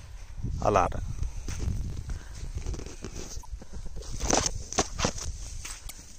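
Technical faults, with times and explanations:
0.82 to 0.88 s, 3.38 to 3.45 s and 5.84 to 5.91 s, damaged data in a compressed stream: three short glitches. Corrupted bytes make the decoder lose frame sync and hunt for the next valid header.
1.49 to 2.61 s, block size mismatch (truncated): a buzz at 45.9 Hz, and the sound runs about 1.07 times fast. Each block loses its tail because one stage writes more than the next reads, which fits 1024-sample blocks being written.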